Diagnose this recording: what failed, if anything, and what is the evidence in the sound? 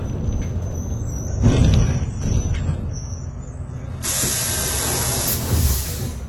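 Network slowdown dropped the adaptive stream to a lower bitrate from 1.28 to 5.28 s: everything above 11.8 kHz vanishes abruptly, codec artefacts rise, no gap.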